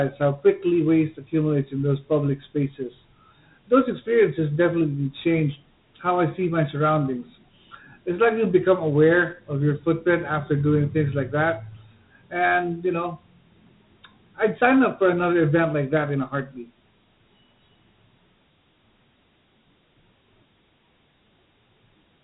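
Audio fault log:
throughout, Dialogic VOX ADPCM: the speech has been squeezed through a 4-bit adaptive differential coder of the kind used for phone menus and voicemail, which fits an OKI-style file at around 32 kbps and 8,000 samples a second. Nothing survives above 3.9 kHz, so the sound is thin and narrowband. Each sample keeps only a coarse step up or down from the last, and the resulting rounding error rides along as a plainly audible gritty hiss that tracks the speech.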